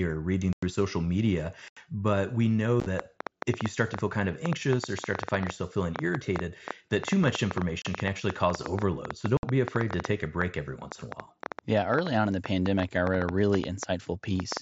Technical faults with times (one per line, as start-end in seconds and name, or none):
0.53-0.63 unconcealed Bluetooth headset packet loss
1.68-1.77 unconcealed Bluetooth headset packet loss
2.80-2.86 unconcealed Bluetooth headset packet loss
2.99-14.58 train of clicks
7.82-7.85 unconcealed Bluetooth headset packet loss
9.37-9.43 unconcealed Bluetooth headset packet loss